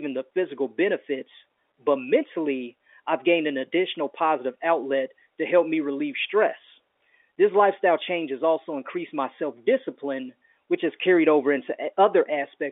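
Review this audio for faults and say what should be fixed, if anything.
No faults found; nothing needs fixing.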